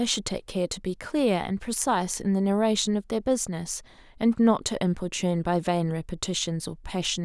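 No technical faults are audible anywhere in the speech.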